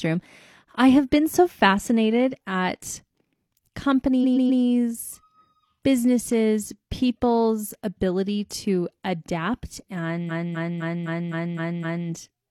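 From 4.20 to 4.59 s, repeated frames make a 128 ms chunk replay three extra times, a stutter adding 384 ms. From 10.26 to 12.05 s, a 256 ms chunk loops seven extra times, stretching the audio by 1.79 s.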